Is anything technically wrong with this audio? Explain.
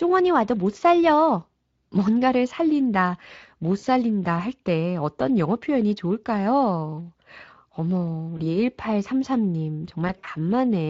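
Yes. Speex codec damage runs throughout: this mid-rate CELP coding, which fits roughly 20 kbps, leaves plainly audible coding damage in the speech.

VoIP packet loss concealed by the speech codec occurs at 3.79 to 3.85 s, 8.37 to 8.49 s, and 10.07 to 10.29 s. There, the decoder stretches its last pitch and filter while fading the gain, producing brief buzzy or noisy stretches that fade. The final stretch is broken loss scattered over about 200 ms, with its longest gap about 60 ms.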